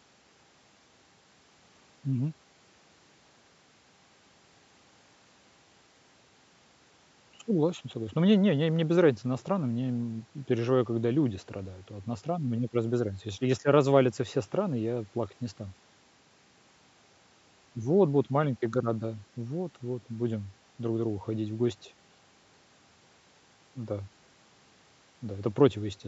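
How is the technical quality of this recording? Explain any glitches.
No glitches turn up anywhere in this speech; it has simply passed through ordinary call microphone processing, which trims the deepest bass, as that processing is meant to.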